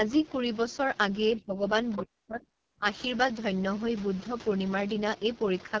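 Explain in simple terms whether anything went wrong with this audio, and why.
Throughout the recording the talking sounds rough and raspy, with a dull top end where nothing above about 7 kHz gets through. That is the AMR wideband (HD Voice) codec, the compression phone networks use for HD calls, running at one of its lowest settings. At that setting it cannot rebuild the voice faithfully, so it patches over the gaps with a coarse approximation and the voice turns gritty.

Twice the talker's voice sinks sharply. From 1.38 to 1.64 s it drops clearly for about a third of a second, and from 2.02 to 2.85 s it almost vanishes for most of a second. This is speech suppressed in double talk, likely because both people spoke at once. The phone's echo canceller could not tell its own talker apart from the other caller's sound coming out of the speaker, so it turned everything down.

Just before that second dip, from 1.95 to 2.02 s, a brief, faint scrap of a different voice slips through, quieter than the talker. 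That is the other side's voice leaking through. The other person was likely coming out of this phone's loudspeaker, and the echo canceller did not fully remove that sound before it reached the microphone.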